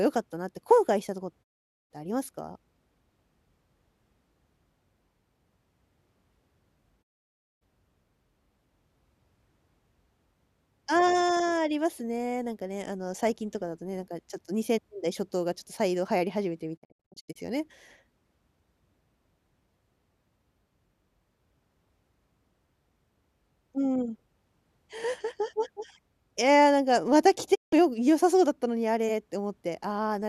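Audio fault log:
1.42–1.92 s, 7.01–7.63 s, 16.76–17.37 s, 27.53–27.74 s: digital broadcast dropout. The receiver mutes with a 20 ms fade to silence, and the speech sent in the gap is lost. At 16.76 s it is several short holes, the longest 72 ms. There is no concealment noise, only silence, and the lengths fit 24 ms frames.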